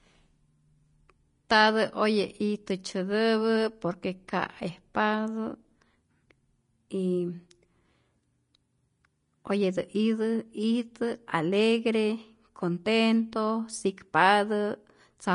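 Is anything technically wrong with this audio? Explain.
Yes. Throughout, the speech sounds hissy and grainy, with nothing above 10.6 kHz: likely Vorbis compression, coarsely quantising treble into noise, consistent with roughly 32 kbps.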